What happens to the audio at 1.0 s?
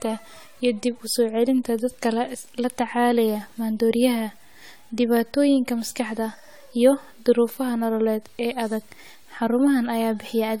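Generation loss runs through 1.0 s and the whole clip, likely from around ten AAC encode passes re-quantising the speech, leaving it swirly, hollow and smeared with blurred attacks.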